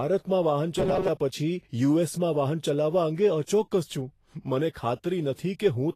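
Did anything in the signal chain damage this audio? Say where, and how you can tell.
Yes, two things. The whole clip carries codec damage, most likely Vorbis compression at a low setting, something around 33 kbps by the sound of it. Nothing exists above 14.1 kHz, and the treble that is left comes across grainy and hissy. That happens when the codec quantises the upper residue so coarsely that fine detail turns into noise of roughly the same energy. The speech sits on that rough, smeared top end throughout.

The second problem is at the driver or buffer stage, between 0.78 and 1.10 s. The sound turns into robotic sound from repeated short buffers: a rigid, metallic buzz at 188 Hz that loosely follows the speech. That pitch implies a chunk of about 5.3 ms being replayed. Fresh audio was likely arriving too slowly, so the software looped the last short block and dropped about half the real signal in that stretch.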